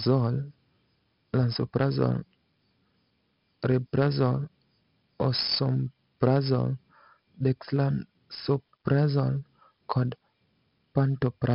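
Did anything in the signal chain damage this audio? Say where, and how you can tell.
Yes, at the codec stage: heavy 4-bit ADPCM compression throughout. Coarse 4-bit prediction steps leave gritty hiss riding every loud passage. The spectrogram shows level-tracking broadband noise and nothing above 5.3 kHz, consistent with about 44 kbps.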